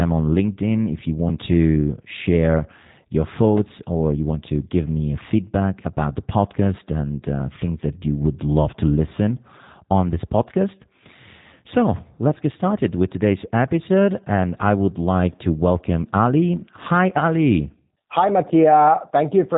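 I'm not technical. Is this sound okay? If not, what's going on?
No. Throughout the clip, the speech has been through the G.729 codec, a compact format built for internet phone calls. Rather than storing the sound itself, it keeps a rough description of the voice every hundredth of a second and rebuilds speech from that at the other end. Everything above about 3.8 kHz is gone, so the voice sounds muffled, and the rebuilding is audibly imperfect, giving it a rough, slightly synthetic edge.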